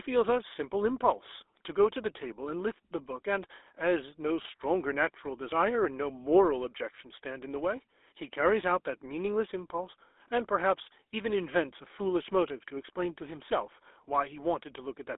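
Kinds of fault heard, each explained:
GSM full-rate codec: The whole clip passes through the original GSM voice coder, which models the vocal tract and excites it with a coarse, regularly spaced pulse train, giving plainly audible buzzy, gravelly roughness throughout, consistent with its 13 kbps rate. The sound is confined to a telephone band of roughly 300 Hz to 3.6 kHz. On a spectrogram, nothing appears above 3.8 kHz and the harmonics look smeared and grainy. The waveform shows a coarse, pulse-like texture.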